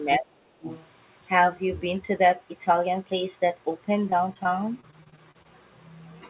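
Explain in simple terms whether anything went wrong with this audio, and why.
Other side's voice leaking through, at 0.13 to 0.18 s and again at 0.64 to 0.87 s: faint scraps of a second voice, likely the far end's loudspeaker picked up by the microphone and not fully removed.

Speech suppressed in double talk, from 0.19 to 0.69 s: the talker's voice dips sharply and drops out in pieces, likely because both sides spoke at once and the echo canceller turned everything down.

Repeated packet loss (robotic sound), from 4.1 to 5.46 s: many tiny holes, none longer than about 31 ms, are each patched by stretching the previous sound, so the speech turns choppy and robotic.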